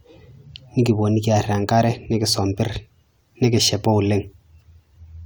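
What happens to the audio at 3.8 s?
Nothing goes wrong at 3.8 s: the speech carries on intact, with no dropout, click or other fault at that moment.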